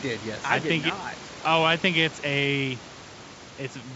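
The speech comes through G.722 wideband coding at 64 kbit/s with its bandwidth reaching about 7 kHz, while the room's own background noise sits about 18 dB below the voice, and no technical faults appear anywhere in the signal.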